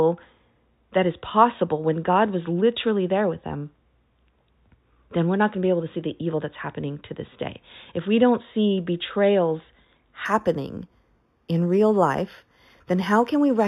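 A speech clip with imaging from linear upsampling from 10.25 s to the end, just after "we don't see betrayals". The top sounds dulled, with a faint metallic shimmer. This fits an 8 kHz source raised to 48 kHz by straight-line interpolation. A mirrored image sits between 4 and 8 kHz, roughly 30 dB down.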